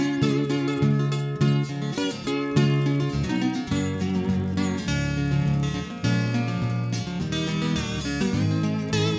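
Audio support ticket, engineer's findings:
Resampler restarted on every block, 24 kHz to 16 kHz, 2.44 s to end. Each 20 ms block converted in isolation; filter sees silence or wrong samples at edges. Result: 50 Hz buzz on the sound, present only with signal.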